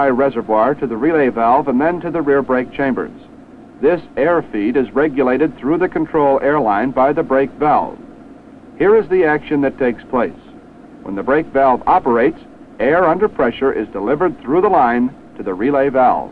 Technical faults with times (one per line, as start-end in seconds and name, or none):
none